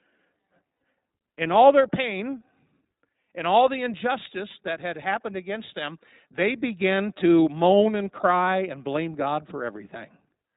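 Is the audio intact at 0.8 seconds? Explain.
No. From 0.76 to 0.80 s, just before "in all their pain", packets went missing and the iLBC decoder filled a 40 ms gap, which fits two lost 20 ms frames, by repeating the last pitch cycle mixed with noise. That gap sounds like a brief held, slightly buzzy vowel. Because each iLBC frame is decoded independently, the voice recovers almost immediately afterward.

The whole clip also passes through the iLBC codec, which points to its 15.2 kbps mode. Nothing above 4 kHz survives, and the excitation coding leaves the speech plainly rough and synthetic.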